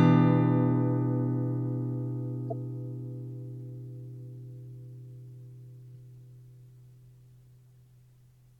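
Everyday sound recording with two instances of corrupt frame decoded. At 2.50 to 2.53 s a short chirp-like burst peaks around -25 dBFS, consistent with a couple of damaged compressed frames. At 5.94 s a much fainter blip, around -50 dBFS, suggests a few more. In each case the decoder played frames whose bits had been flipped, so misread codes and gains put energy at the wrong frequencies for the length of the damaged frames.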